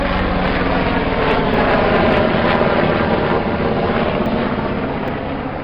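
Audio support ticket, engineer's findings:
Abrupt forward jumps in the sound, no gap of silence, at 1.54 s, 4.26 s and 5.08 s. Likely dropped buffer (overrun): capture not read in time, hardware overwrote the samples, ends spliced together. Roughly 70 ms lost at the first two, about 20 ms at the last.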